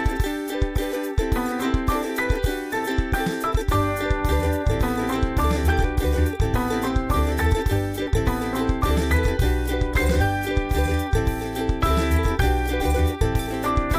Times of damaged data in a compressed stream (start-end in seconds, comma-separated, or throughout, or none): 2.72, 5.83, 8.06, 10.20-10.22, 12.80